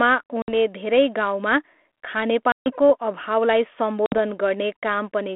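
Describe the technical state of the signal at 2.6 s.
At 2.6 s the speech sits inside a packet loss on an ADPCM call, spanning 2.52 to 2.73 s, with about 140 ms of audio gone, roughly seven packets. The gap is filled with silence: a flat line on the waveform and a blank vertical stripe across the 250 Hz to 3.5 kHz band of the 32 kbit/s G.726 line. Its hard edges cut in abruptly. Afterwards the decoder's predictor and step size no longer match the sender's, so speech re-enters slightly distorted before settling.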